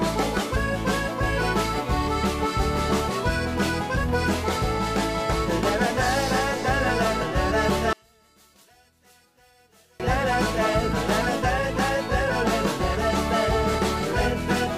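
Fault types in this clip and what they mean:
one channel inverted: from 7.93 to 10.00 s the sound drops by about 35 dB, collapsing to a faint residue as centred content cancels. The likely cause is one stereo channel with reversed polarity, so the shared signal subtracts when summed to mono.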